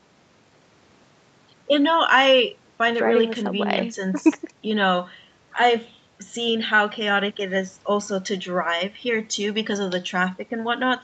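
Nothing here counts as a fault: the speech comes through a normal call chain, and the missing top end above about 8 kHz is just the bandwidth that call path is set to carry.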